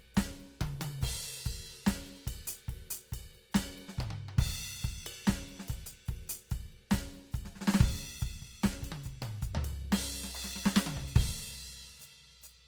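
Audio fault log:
Throughout – Opus compression. The music sounds plainly grainy and rough, and its tones turn noisy rather than clean. Highs still reach about 20.2 kHz. This likely comes from Opus in music mode at a low rate, near 24 kbps, filling starved bands with noise.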